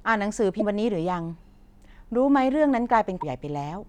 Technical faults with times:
0.59-0.62 broken MP3 bit reservoir
3.20-3.23 broken MP3 bit reservoir

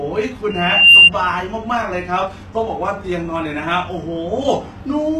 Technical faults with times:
0.00-5.20 HE-AAC compression
0.50-1.11 loudspeaker feedback squeal

